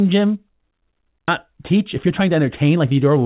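A speech clip carried over a call path whose G.711 A-law coding leaves nothing above 4 kHz, which fits a 64 kbps narrowband stream. At 1.28 to 1.30 s a stretch of audio was dropped while later audio was already queued, a skip ahead: about 0.7 s of speech never plays, and the two sides are butted together with no filled gap, so the talker seems to leap forward. From 1.53 to 3.17 s the buffer, still holding more audio than its target, trimmed out short pitch-period slices again and again to claw back delay. This jitter buffer speed-up runs the speech at about 109% of normal pace with unchanged pitch, shaving off roughly 150 ms in total and leaving the delivery sounding hurried.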